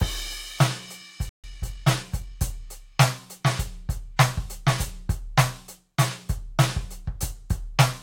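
Music, interrupted by a playback stall at 1.29 s: the output drops to silence for about 145 ms and resumes at 1.44 s. The likely cause is the player running out of buffered data or its audio thread being blocked, leaving nothing to send to the output during the gap. From 1.44 s to 2.40 s a time-compressed catch-up follows. The player drains its backlog by removing short segments and cross-fading across the joins, so the music runs about 1.15 times fast at unchanged pitch.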